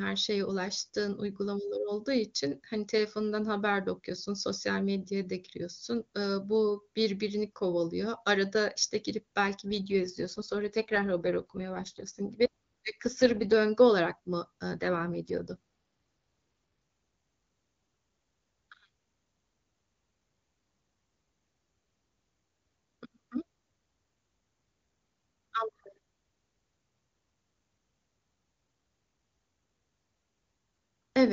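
From 9.66 to 13.53 s, and again from 14.75 to 15.56 s, the speech turns rougher and more synthetic, with a buzzy, processed edge, while the bandwidth stays the same and nothing drops out. This is an AMR rate drop. The link pushed the wideband codec down to a lower mode and gave the freed bits to error protection. The sound points to a fall from 23.85 to 8.85 kbit/s. Clarity returns once the higher rate is restored.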